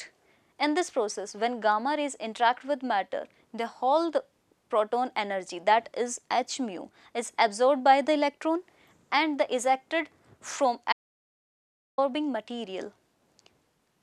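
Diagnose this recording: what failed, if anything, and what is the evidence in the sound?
An audio dropout to silence runs from 10.93 s to 11.98 s. The sound stops mid-flow and returns abruptly. The gap holds silence, with no room tone. About 1.05 s of material is gone. The input link or device likely dropped while recording continued.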